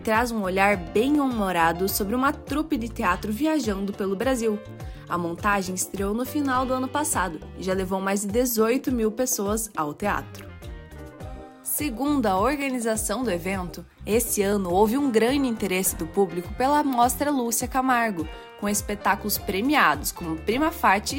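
From 1.15 s to 20.25 s, a click recurs every 1.91 s, about ten times in all. These are likely clock drift buffer slips. Two clocks disagree by around 200 ppm. Each time, a block of roughly 15 samples is dropped or repeated.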